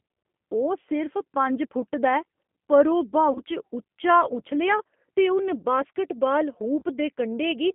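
Speech coded through G.729, here the G.729A variant at 8 kbit/s, is squeezed into a telephone band of roughly 200 Hz to 3.4 kHz. The codec rebuilds each 10 ms frame from a vocal tract filter, a pitch predictor and a handful of pulses rather than the actual waveform, so the damage is plainly audible: everything above the band is gone, and the speech has a rough, slightly synthetic grain throughout. On top of that, VoIP packet loss concealed by the speech codec occurs twice, at 3.32 to 3.41 s and at 6.79 to 6.83 s. Each gap is about 30 ms of missing audio, which fits a single lost packet. The decoder fills it by extending its last pitch and filter settings at falling gain, producing a brief buzzy or noisy smear. Because each frame builds on the one before, the sound stays weakened and distorted for a short while after the audio resumes.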